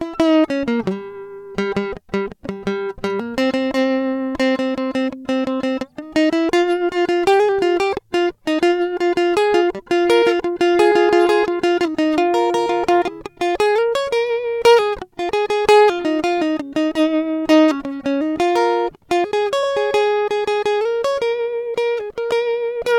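Repeated frames occur at 19.63 to 19.67 s, where a 42.7 ms stretch of the music plays once and then immediately plays again. A short run of compressed data, which fits two codec frames, was delivered twice, and the decoder rendered both copies in sequence. The result is a quick stutter, a tiny hiccup in the music's flow, and the remainder of the clip is pushed back by 42.7 ms.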